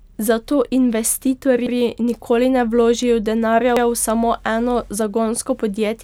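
At 1.67 to 1.77 s, just before "nikoli ne vložijo denarja", you get a stutter from overlapping chunks: each block of roughly 2 s starts 100 ms before the previous one finished, so that slice plays twice at the join. It recurs at 3.77 to 3.87 s, between "nikoli ne vložijo denarja" and "v samo". It sounds like a brief hiccup or click, landing at a steady two-second rhythm.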